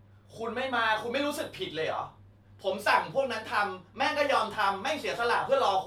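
No technical faults are audible.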